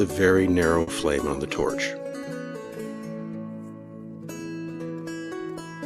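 A short stall from a late packet occurs at 0.81 to 0.89 s in this audio. A packet missed its playout time and the jitter buffer ran dry, so the receiver stretched the last sound for about 60 ms until the packet turned up, then resumed exactly where it left off. Nothing is lost, but that moment is held too long with a faint buzzy smear, and everything after it plays 60 ms later.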